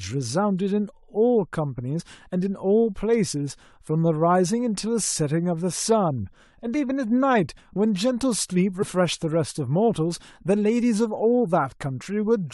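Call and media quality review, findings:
Compressed frames skipped at 1.92–2.01 s and 8.81–8.84 s. Speech jumps forward, around 20 ms lost at the first and around 50 ms at the second. Decoder stage: missing or rejected frames.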